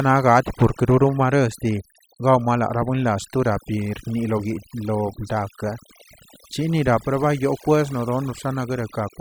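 From start to finish the speech carries overdone noise removal. A noise reducer set far too hard cuts individual frequency bands whenever their level sits near its idea of the noise floor, so the background noise between phrases collapses into near silence dotted with twinkling specks, and the quieter parts of the voice are cut away with it. Unlike a noise gate, which shuts everything at once, the loss here happens band by band and keeps shifting.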